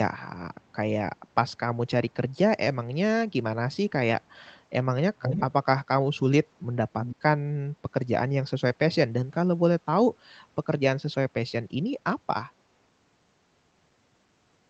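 Echo leak at 0.63–0.75 s, 5.2–5.46 s and 7.02–7.16 s: short delayed copies of the speech, lagging about 0.3 s at first and then about 0.33 s. The first is very faint, the second nearly as loud as the speech, the third clearly audible. This is likely a far-end speakerphone whose echo canceller let its own playback back through, over a call path band-limited near 8 kHz.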